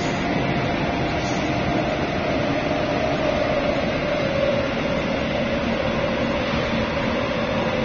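From start to finish, nothing is heard above 6.9 kHz. The sound is dull and smeared, with a fizzy, warbling texture. This is likely AAC compression. The damage fits AAC-LC at about 24 kbps, too few bits, so the encoder discards the upper bands.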